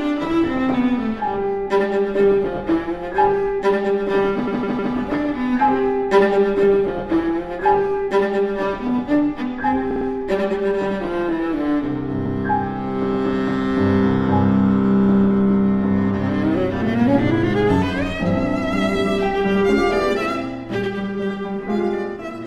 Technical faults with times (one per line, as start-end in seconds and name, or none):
4.47-4.94 repeated frames
9.90-10.06 repeated frames
12.25-12.36 repeated frames